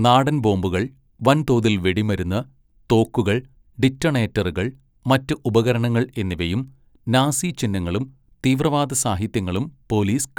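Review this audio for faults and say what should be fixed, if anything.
No faults; nothing needs fixing.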